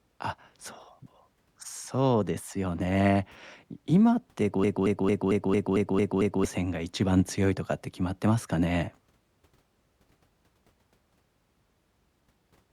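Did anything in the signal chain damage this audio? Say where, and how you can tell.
Yes. From 4.64 s to 6.45 s the speech turns into a broken-record loop. A fragment about 225 ms long repeats exactly, back to back, eight times. The repeats are identical, so this is no natural stutter. The stage is likely playback or the stream feeding it. That stage stalled and kept resending the last fragment it held. The speech that should have filled those 1.8 seconds is lost.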